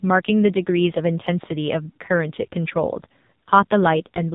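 A speech recording passed through the AMR narrowband mobile codec at a very low rate; the heavy damage points to roughly 6 kbps. The codec samples at 8 kHz and rebuilds the voice from a vocal-tract model fed by a few pulses per subframe, so nothing above 4 kHz survives and the voice comes out thin, buzzy and synthetic throughout. Lost AMR speech frames also appear twice. Failed radio frames forced the decoder to conceal the gaps by reusing its last good pitch and filter settings at dropping gain. From 1.90 to 1.98 s, about 60 ms of audio, which fits a short run of missing frames, the sound smears and sags before recovering roughly. From 3.44 to 3.50 s, a shorter loss consistent with a single frame, there is a brief dip or warble.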